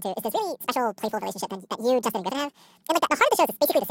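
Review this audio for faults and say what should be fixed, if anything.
The reader took pairs of samples as a single frame, treating the stream as if it had two channels or samples twice as wide, so the audio was read two samples at a time (double speed). Across the whole clip the speech runs at 2.0 times its proper rate and sits an octave too high. To prevent this, the reader's channel count and sample width should be set to match the source format before decoding.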